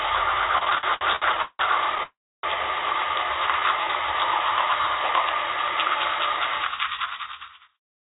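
This recording of everyday sounds, carried over a call path whose band stops at 4 kHz (consistent with 64 kbps G.711 A-law), first shows repeated stalls (stutter) from 0.58 to 2.01 s. Fourteen separate gaps are filled by stretching the last sound, about 450 ms in total and roughly 31% of that span, the longest being 173 ms. Nothing is lost, so the sound drags in jerky steps. This differs from a single freeze because it is many short hitches rather than one halt. A call audio freeze follows immediately, from 2.03 to 2.45 s. The last sound is held briefly, then falls to about 300 ms of silence before playback resumes exactly where it stopped, adding a gap of about 403 ms. The likely cause is packets held up long enough to empty the jitter buffer once. It stands apart from the stutter because it is one continuous pause that decays to silence instead of a string of brief repeats. From 3.60 to 4.14 s a jitter buffer slow-down plays the sound at about 89% speed, adding about 64 ms by repeating single pitch periods while the pitch stays unchanged. 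The result is drawn out with no gap. This is what separates it from a stall, where a hold or silence breaks the flow. Finally, a jitter buffer speed-up runs from 6.04 s to the end at about 109% speed, trimming roughly 0.2 s in small pitch-period cuts. Events sound hurried but keep their pitch, unlike a resampling error, which would raise the pitch. The smooth fade-out from about 6.5 to 7.81 s overlaps this section.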